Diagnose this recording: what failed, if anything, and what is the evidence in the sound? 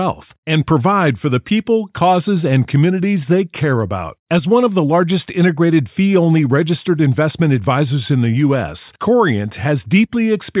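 Nothing in the chain has failed: the speech signal is continuous and intact, with no audible disruption at any stage from capture through to playback.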